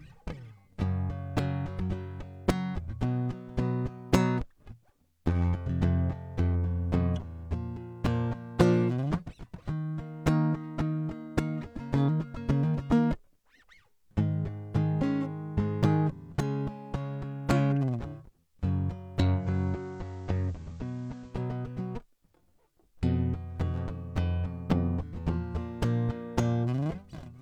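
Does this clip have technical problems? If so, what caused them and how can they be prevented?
Yes. From 19.34 to 21.40 s the music shows digital radio blending to analogue: a 153 ms cross-fade to the FM feed drops the level by about 3 dB and brings up hiss roughly 35 dB down. Preventing it requires a stronger digital signal, such as a better antenna, or disabling the receiver's analogue blend.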